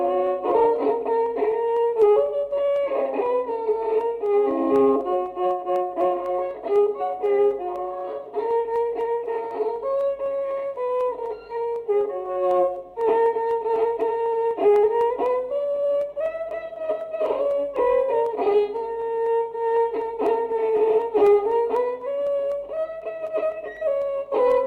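Periodic USB or driver dropouts run through nearly the whole recording, from 0.27 s to 24.52 s, as a steady tick every 0.25 s, around a hundred in all. At each tick a tiny sliver of audio, well under a millisecond, is skipped rather than replaced with silence, so the waveform jumps and produces a small click. The fixed spacing points to a background task stalling the USB bus or audio driver on a regular schedule.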